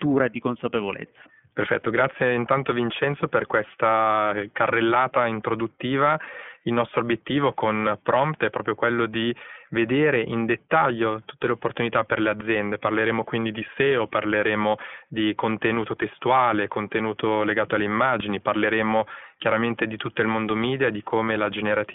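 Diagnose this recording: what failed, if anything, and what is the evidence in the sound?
Codec stage: the speech has passed through an iLBC codec for its whole length. Nothing above 3.6 kHz survives, leaving a telephone-band sound with a plainly audible rough, synthetic texture. Each frame's excitation is coded independently, which fits 20 ms frames at 15.2 kbps.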